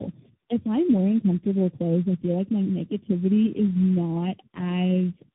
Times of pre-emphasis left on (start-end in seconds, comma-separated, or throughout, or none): none